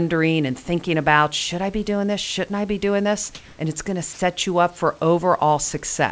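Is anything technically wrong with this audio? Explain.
Yes. From 3.35 to 3.59 s, right after "I be doing this", the room background is replaced by comfort noise for about 240 ms. This is likely discontinuous transmission: the sender's voice detector judged the pause silent and stopped sending audio, and the receiver filled the gap with synthetic noise shaped roughly like the background. The audible result is a flat, featureless hiss, about 4 dB different in level from the real background, which sits about 29 dB below the loudest speech. The genuine room noise, about 36 dB under the speech, returns once talking resumes. The call path carries nothing above 8 kHz, which fits G.722 at 64 kbps.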